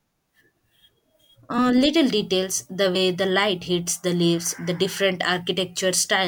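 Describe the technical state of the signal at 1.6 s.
At 1.57 s, compressed frames are skipped: a couple of whole frames never play, so the audio jumps ahead by about 50 ms, consistent with 24 ms frames. Unlike a dropout, there is no silent gap.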